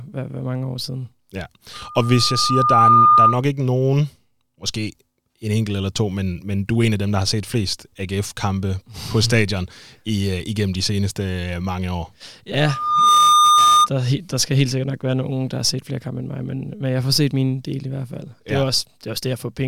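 Loudspeaker feedback squeal appears from 1.73 to 3.42 s, just before "ikke nogen måske en," and again from 12.60 to 13.89 s, between "mange år" and "der skal helt sikkert." A microphone is hearing its own loudspeaker, and at 1.2 kHz the loop gain tops unity. That tone feeds on itself, swelling over about a second the first time and half a second the second time, into a steady whistle about 10 dB above the speech.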